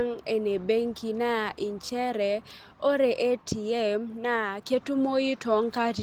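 The speech signal shows no technical faults, and the Opus voice compression it passed through keeps the full audio band, with content reaching up to about 20.3 kHz.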